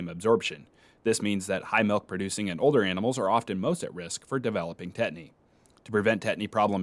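No audible technical faults turn up in this recording.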